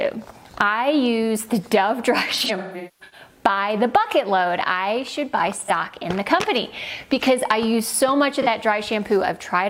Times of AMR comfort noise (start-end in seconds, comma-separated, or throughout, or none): none